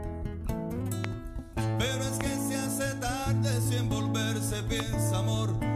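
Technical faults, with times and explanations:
1.04–1.07 s, 2.21–2.23 s and 4.80–4.82 s: loud pop. Each is a single sharp pop of about 20 ms over the continuing sound, the first peaking about 20 dB above the signal and the others about 15 dB. The likely cause is a brief voltage pulse from a switch, static or driver glitch.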